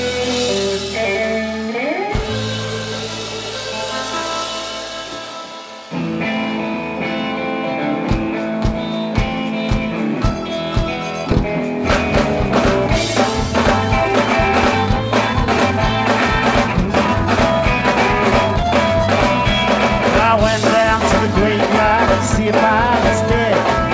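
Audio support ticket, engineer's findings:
Skip ahead at 11.32 s: playback jumps forward with no fill, roughly a second and a half of audio missing, the two sides joined almost directly. Jitter buffer likely discarded queued audio while later packets were already waiting, cutting the delay by about that amount.

Jitter buffer speed-up at 15.33–15.87 s (113%), 16.28–21.66 s (108%) and 22.06–22.53 s (111%): sound runs faster at unchanged pitch, hurried feel. The buffer held more than its target and trimmed short pitch-period chunks repeatedly, about half a second in total. G.722 path, band ends at 8 kHz.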